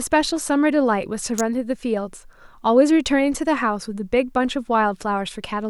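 A nearby switch, motor or static discharge likely threw a brief electrical arc that the audio line picked up, producing an electrical switching spike in this speech recording. It lands between 1.38 and 1.41 s, lasting roughly 20 ms, and reaches a peak of around -10 dBFS. It is heard as a sharp, tight snap laid over the speech, an abrupt crack with no acoustic decay.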